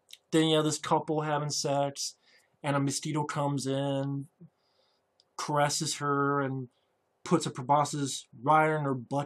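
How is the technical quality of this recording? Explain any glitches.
No glitches or technical faults can be heard here.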